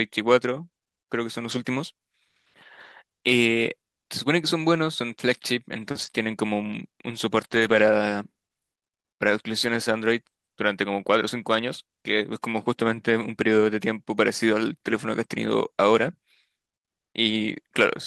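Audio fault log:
1.51 s and 14.88 s: lost packet rebuilt from error correction. Each time two packets went missing and about 40 ms of speech was played from the following packets' low-bitrate copies, so it sounds briefly rougher and noisier rather than silent.
4.61–7.82 s: scattered short gaps. About three brief packet losses, the longest around 30 ms, were patched by continuing the preceding sound, leaving small ticks, smears and hiccups in otherwise continuous speech.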